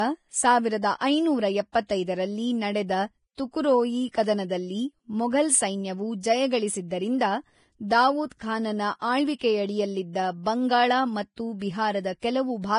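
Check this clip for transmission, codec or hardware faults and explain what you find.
There's one problem, and it runs the whole length of the speech: Vorbis compression damage, and it's heavy. Nothing comes through above about 10.6 kHz, and the treble that's left sounds hissy and grainy, with roughened tones and smeared consonant attacks. That's likely a low-quality Vorbis encode, which fits a bitrate somewhere near 28 kbps. The encoder keeps a smooth outline of the spectrum but quantises the fine high-frequency detail so coarsely that it turns into noise of similar energy.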